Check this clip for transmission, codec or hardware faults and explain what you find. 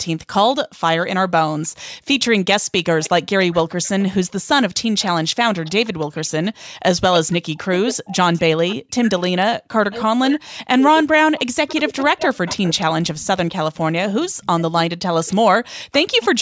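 Three echo-canceller faults appear on this speech call.

Echo leak runs from 1.0 to 15.95 s. A faint copy of the speech trails the original by 311 ms, roughly 20 dB below it. A loudspeaker on the far end was likely picked up by its microphone, and the canceller let some through.

Background gated by the echo canceller occurs twice: 1.94 to 2.05 s and 6.56 to 6.78 s. Each time the room sound drops by about 40 dB, for around a tenth of a second or slightly more. The canceller clamped the microphone while the loudspeaker played, then released it.

Speech suppressed in double talk spans 7.12 to 16.4 s. The talker's voice dips and breaks up in pieces, falling by about 40 dB at worst, across roughly five seconds in total. With both sides speaking, the canceller likely could not separate voice from echo and turned both down.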